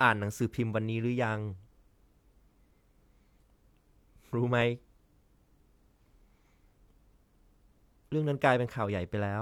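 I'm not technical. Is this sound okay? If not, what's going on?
No. At about 4.62 seconds there is a block of digital silence. For roughly 3 milliseconds, the speech is replaced by pure silence, and the sound cuts out and back in with no fade. A gap this short is too brief to hear as silence. It comes across as a tiny tick or dip. The length fits a 128-sample buffer. Either the software didn't refill its output buffer in time, or a calculation produced invalid numbers.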